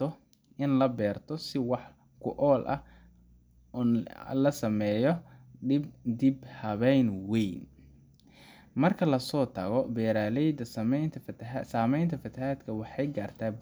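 No technical faults are audible.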